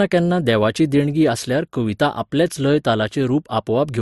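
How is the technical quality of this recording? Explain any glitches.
The recording has one fault running through the whole of the speech: a layered, doubly compressed character. Transcoding between lossy codecs is the likely cause. Nothing reaches above 12 kHz, and two distinct kinds of coding artefact are heard together. That mix fits an MP3 at around 61 kbit/s re-encoded to Opus at around 48 kbit/s, with Opus spending bits on the MP3 damage while adding its own. A single codec would leave one consistent artefact signature, not this blend.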